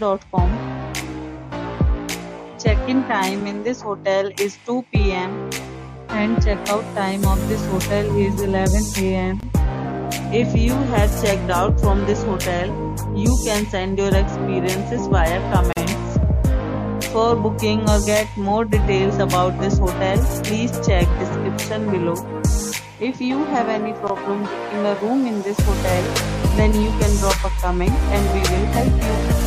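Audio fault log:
9.40–9.43 s and 15.73–15.77 s: gap at a join of encoded pieces. Encoder delay and end padding stayed in at the joins, leaving brief silences of about 27 and 41 ms. Each shows as a flat waveform stretch with smeared edges and a narrow blank vertical band on a spectrogram.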